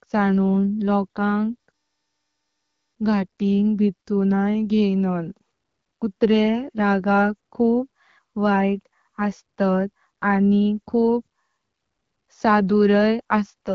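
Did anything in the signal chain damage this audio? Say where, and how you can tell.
No, nothing stood out on listening to this speech as damage from any stage of the chain, and the AMR wideband (HD Voice) coding at 12.65 kbit/s sounds as that rate normally does.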